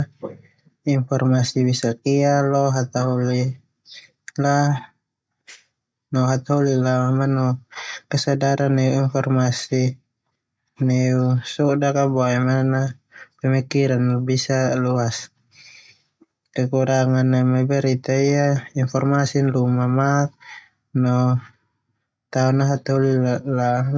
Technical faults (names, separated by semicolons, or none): none